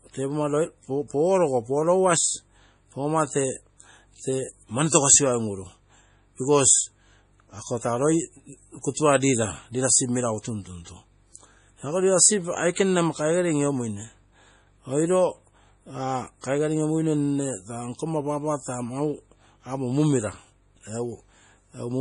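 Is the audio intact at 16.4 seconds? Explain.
No. From 16.42 to 16.44 s, a short hiss runs for about 23 ms just ahead of a sharp onset, and the attack itself sounds blunted and smeared. This is pre-echo. The codec works in blocks and spreads its quantisation noise evenly across each one. Because the onset lands late in its block, noise scaled for the loud attack also fills the quiet stretch before it, where nothing masks it.

Around that moment, and throughout the speech, the sound is watery and swirly, with a metallic edge on s sounds and no content above 10.4 kHz. That fixed cut-off and the weak detail flickering in and out from frame to frame are the marks of heavy MP3 compression, likely at a low bitrate close to 32 kbps. When bits run short, the encoder discards the treble and zeroes faint frequency lines.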